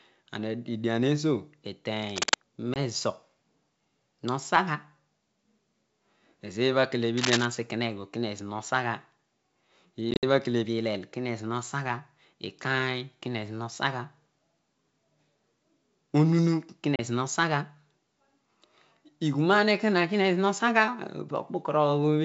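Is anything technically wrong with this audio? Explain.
Yes. Two kinds of fault are audible in this speech.

Cable scratch noise, at 2.02–2.34 s and 7.17–7.46 s: a worn cable, connector or control was likely being moved, so its contact resistance jumped about rapidly. This lays ragged, dense scratching over the speech, roughly as loud as the speech itself.

Packet loss on an ADPCM call, at 2.74–2.78 s, 10.11–10.24 s and 16.96–17.00 s: missing packets were filled with silence, leaving the receiving decoder's predictor and step size out of step with the sender's. Each gap cuts off abruptly, and the speech comes back with brief, slight distortion. The first gap lasts 20 ms and the last 30 ms. The middle one scatters 90 ms of dropouts across 120 ms, with the longest run at 60 ms. The wideband G.722 coding itself shows little or no damage.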